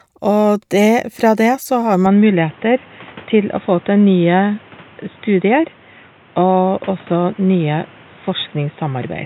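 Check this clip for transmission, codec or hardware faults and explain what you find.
From 2.06 s to the end, the speech suddenly turns dull and boxy, likely an input switched to a poorer device, cutting everything above 3.8 kHz and adding a faint noise floor.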